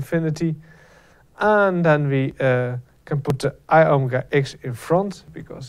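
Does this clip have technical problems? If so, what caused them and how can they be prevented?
Yes. Periodic USB or driver dropouts: something stalled the USB bus or audio driver about every 0.99 s, from 0.35 s to 5.28 s, skipping roughly 10 ms of audio each time. About seven evenly spaced ticks result wherever sound is present. Prevent this by using larger buffers and disabling background tasks or power-saving on the USB port.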